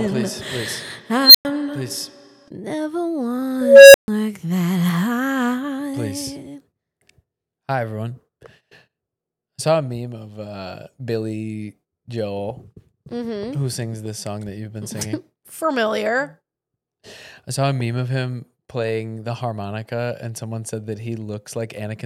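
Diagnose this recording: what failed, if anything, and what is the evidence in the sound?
An unstable filter in the processing chain. At 1.23 s a squeal around 4 kHz swells over 113 ms, clips, then goes silent for 104 ms. At 3.61 s a tone near 500 Hz builds over 330 ms before a 139 ms gap. Runaway feedback overflows, then resets.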